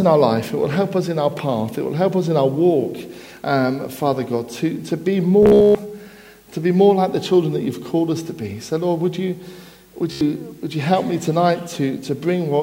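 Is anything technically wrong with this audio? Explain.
Yes, there is Bluetooth stutter at 5.43 to 5.75 s and again at 10.12 to 10.21 s. Packets arrived late or not at all, so the receiver kept replaying its last short buffer until fresh data came. The first burst loses about 276 ms scattered over 320 ms, with a longest run near 130 ms, and is heard as a machine-gun buzz. The second loses about 87 ms. Unlike a plain dropout, the gap is filled by the same sliver repeating rather than silence, and playback resumes further on.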